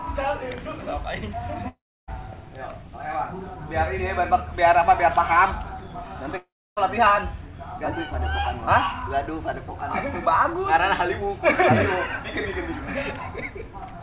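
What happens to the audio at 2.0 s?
At 2.0 s the audio is inside a gap that runs from 1.68 to 2.10 s, most likely a long network dropout: about 0.4 s of audio never arrived. The receiver briefly stretches the last sound into a fading buzz, and after that only about 0.31 s of silence remains. The sound then resumes at 2.10 s with the missing stretch simply gone, still band-limited below 4 kHz by the G.711 mu-law call path.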